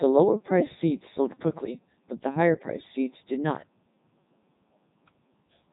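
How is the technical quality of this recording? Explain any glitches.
Technical quality is poor: the whole recording has been squeezed through a very low-rate speech vocoder, in a way that fits the 3.2 kbit/s mode. Codec 2 vocoder damage runs throughout. The speech is rebuilt from sine waves using only pitch, voicing, energy and a spectral envelope, so it sounds heavily robotic and buzzy, with nothing above 3.8 kHz.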